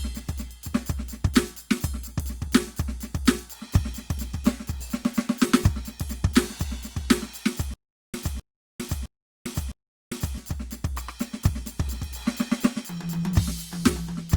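Stutter with silent gaps, from 7.74 to 10.38 s: the music stops moving forward and a short burst of about 0.26 s repeats four times, each followed by about 0.40 s of dead digital silence, so the fragment comes back every 0.66 s at a steady pace. This is likely a stalled player or stream that replayed its last buffered fragment at each retry before running dry, so the music that belonged in that stretch is missing.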